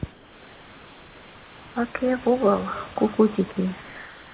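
From 0.12 to 1.76 s, the room's background is replaced by a smooth, even hiss with none of its texture, sitting about 26 dB below the loudest speech and about 2 dB lower than the real background around it. This is comfort noise in place of the background, likely from discontinuous transmission, where the sender went quiet and the receiver synthesised filler noise. Unlike a noise gate or suppressor, the pause is filled with a uniform, artificial bed rather than going silent or pumping.

From 2.0 s to the end of the clip there is a feedback echo between two devices. The speech returns at a fixed spacing of roughly 0.3 s, with its loudest return about 23 dB below the direct speech. Each return is thinner and more ringing than the last, heard within the narrow band that stops at 4 kHz. The regular repeating spacing and the growing coloration set it apart from ordinary room reverberation, which smears into a smooth tail.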